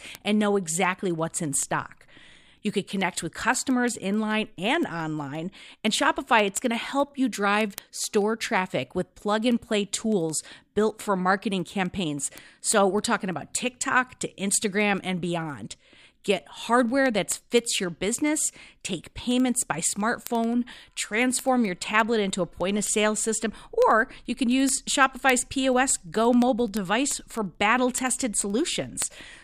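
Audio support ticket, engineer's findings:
Word clock ticks, steady, roughly every tenth of a second, 0.15 to 29.37 s, around 300 in total. Unlocked digital input slipping samples, receiver clock roughly 300 ppm off sender.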